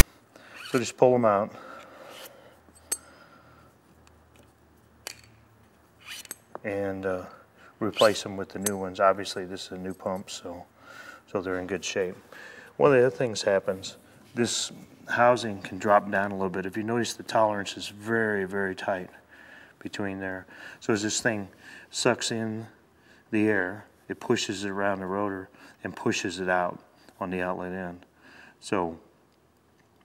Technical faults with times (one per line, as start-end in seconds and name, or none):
0.00 file tags played as audio